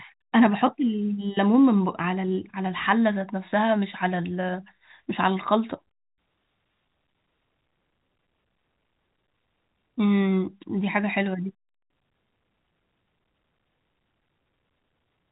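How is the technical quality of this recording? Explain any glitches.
No glitches are audible in the speech, which carries the band-limited, narrowband character of G.711 telephone coding with only faint coding noise riding under the signal.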